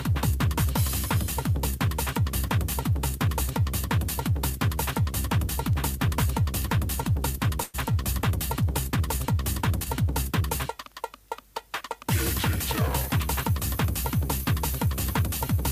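From 5.29 to 10.15 s, mains hum adds a steady 50 Hz tone, roughly 15 dB under the sound, from power-line coupling. It shows as a thin horizontal spectrogram line near the bottom.

At 7.63 s, a call audio freeze stretches the last sound into a fading buzz for about 104 ms, likely from delayed packets draining the jitter buffer. The waveform shows a smeared, decaying patch with no true silence, then resumes intact.

From 12.48 to 15.62 s, a jitter buffer speed-up runs the sound 4% fast at unchanged pitch. Pitch-period slices totalling around a tenth of a second are removed, leaving slightly compressed spectrogram patterns.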